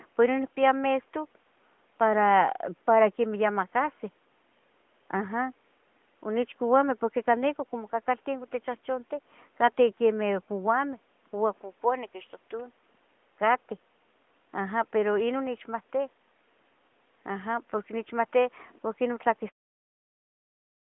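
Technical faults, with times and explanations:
Nothing here counts as a technical fault, so there's nothing to list for this speech clip.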